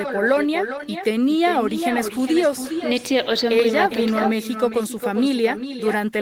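Speech, with echo with no canceller running through the whole clip. Every phrase returns around 400 ms later as a thinner copy about 8 dB below the direct sound: the far end's loudspeaker output is reaching its microphone and coming back across the network uncancelled.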